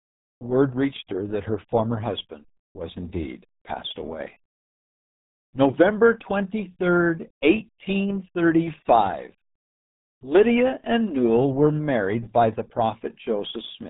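Speech throughout carries heavy RealAudio 14.4 codec damage: muffled and gargly, with nothing above 3.8 kHz, which fits an 8 kbit/s dial-up stream. A spectrogram shows a flat ceiling at 3.8 kHz and smeared, blotchy harmonics below it.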